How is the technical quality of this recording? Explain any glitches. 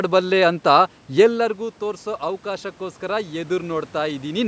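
There's one real glitch: an automatic gain rising from 1.57 to 4.43 s. Around a second and a half in, the talker moves back and the voice at the mic drops by about 11 dB. The gain control slowly adds about 4 dB to compensate, so voice and room noise swell together. The call processing's high-pass takes out the deepest bass, and nothing reaches above 8 kHz.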